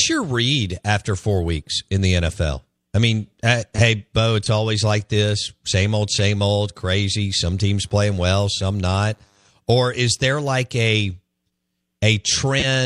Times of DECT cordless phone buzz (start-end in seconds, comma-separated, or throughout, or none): 7.49-9.49